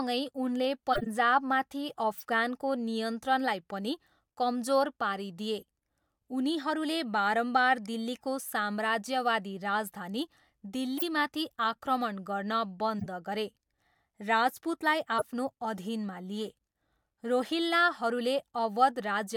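Corrupt frame decoded at 0.93–1.07 s, 2.13–2.23 s, 5.60–5.64 s, 10.98–11.03 s, 12.99–13.06 s, 15.18–15.24 s and 16.47–16.54 s: damaged compressed frames were played as if valid, so misread codes and gains placed energy at wrong frequencies across a few frames each time. Each event is a brief chirp or noisy blip cutting into the speech, loudest near 11.0 s and around 1 s, and quietest at 5.6 s.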